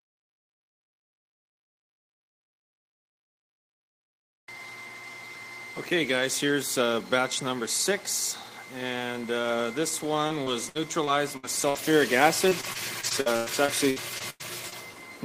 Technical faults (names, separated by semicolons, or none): repeated packet loss (robotic sound)